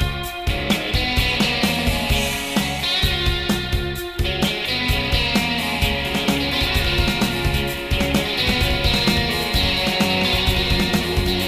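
From 6.05 s to the end, a doubled audio track appears: a second full-band copy of the sound runs about one and a half seconds behind the original, somewhat quieter, around 5 dB down. It cuts in abruptly, with no decay or room colouring, so it reads as a hard overlapping repeat rather than an echo. The likely cause is the same signal being captured a second time through a slower path, or an edit leaving two copies out of step.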